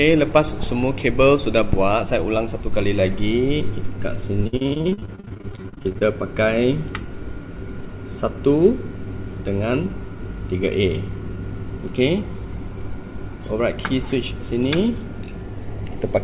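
From 4.44 to 6.03 s, repeated packet loss gives the sound a choppy, robotic quality. Dozens of short holes, the longest about 53 ms, are filled by stretching the preceding sound, leaving nearly half the stretch concealed. Unlike a single dropout, the gaps recur continuously, producing a choppy stutter within a band that ends at 4 kHz.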